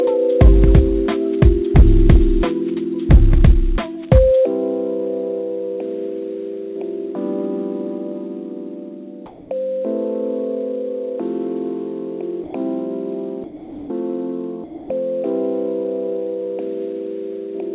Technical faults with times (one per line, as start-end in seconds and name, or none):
9.26-9.50 comfort noise in place of the background
12.44-12.54 sound dropped by the voice detector
13.44-13.90 sound dropped by the voice detector
14.64-14.90 sound dropped by the voice detector